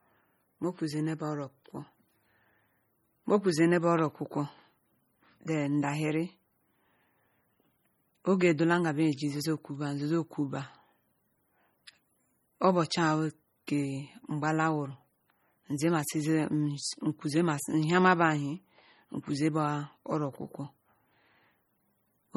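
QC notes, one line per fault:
throughout, MP3 compression: watery, swirling speech with smeared consonants, likely from heavy encoding at around 32 kbps; unlike plain noise, weak components flicker frame to frame.
13.67 s, pre-echo: a short hiss about 10 ms ahead of a sharp attack, codec noise smeared back across its block; unlike a click, it precedes the onset.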